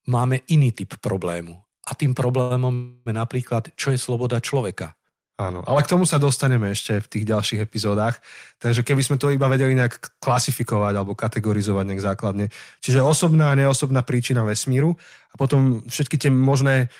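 Speech, with a short stall from a late packet at 2.41 to 2.53 s: a packet missed its slot, the jitter buffer emptied, and the receiver held the last sound for 88 ms before resuming, losing nothing. On a spectrogram the harmonics run flat and smeared for that span. A call audio freeze follows at 2.74 to 3.09 s, most likely from packets held up in transit. The last sound is stretched for 317 ms without dropping to silence, then the speech continues where it stopped, showing as a longer frozen band with no onset in the waveform. Four jitter buffer speed-ups then cut accumulated delay by repeatedly removing pitch-period-sized pieces: 9.11 to 9.77 s at 110% (about 70 ms removed), 14.70 to 14.97 s just after "osobná a neosobná príčina" at 112% (about 40 ms), 15.38 to 15.74 s at 111% (about 50 ms), and 16.14 to 16.66 s at 113% (about 70 ms). Each sounds hurried at unchanged pitch. On a spectrogram the time axis is compressed while harmonic spacing stays the same.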